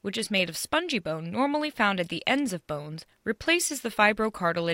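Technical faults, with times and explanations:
No technical faults can be heard in this speech.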